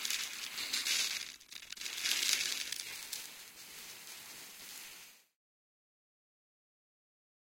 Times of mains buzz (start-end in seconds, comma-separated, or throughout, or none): none